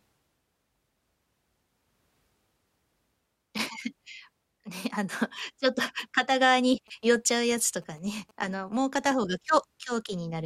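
From 6.56 s to 8.78 s, GSM signalling bursts break in: a nearby 2G phone's radio pulses are rectified by the audio circuitry, giving a galloping run of short buzzes at about 217 Hz, sitting roughly 30 dB below the speech.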